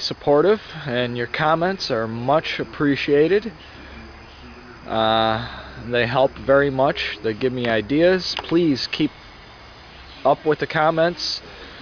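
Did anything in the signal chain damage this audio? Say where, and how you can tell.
No, nothing stood out on listening that would point to damage at any stage of the signal chain.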